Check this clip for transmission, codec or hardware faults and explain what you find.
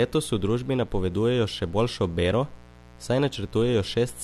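One hardware fault runs through the speech: a mains buzz. It is present from start to end. Switching spikes twice in every 60 Hz mains cycle leak in, spreading harmonics upward. It sounds raspy and steady, well below the speech.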